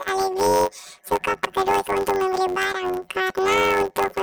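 Throughout, planar audio is read as interleaved: each 10.67 ms block, which fits 512-sample blocks, plays left then right, giving a robotic 93.8 Hz buzz over the speech.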